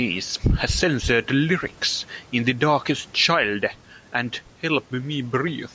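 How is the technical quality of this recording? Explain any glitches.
The recording has two faults. The level pumps throughout, and clicks recur through most of the clip. The speech tops out at 8 kHz, and the room noise sits about 40 dB below it.

Gain pumping runs through the whole clip. The swing is about 5 dB. The likely cause is gain set too high, with a fast limiter or compressor pulling it back on every loud syllable. The result is squashed speech.

Clock drift buffer slips start at 0.37 s and end at 5.04 s. A click lands roughly every 0.94 s, around seven times. Each is a jump in the waveform, which fits a slip of roughly 15 samples. The likely cause is two devices on separate clocks that disagree by about 400 parts per million. The buffer between them slowly drifts until a block is dropped or repeated, and then the cycle restarts.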